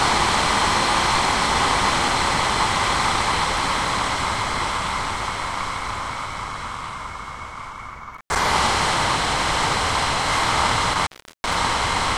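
Intermittent contact at 8.14–8.36 s and 10.93–11.56 s: a loose connection briefly opens, dropping the sound for about 93 ms, then about 375 ms, with crackle at each edge.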